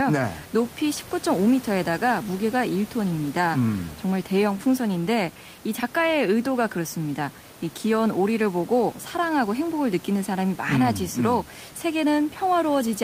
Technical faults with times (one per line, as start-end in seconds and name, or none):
none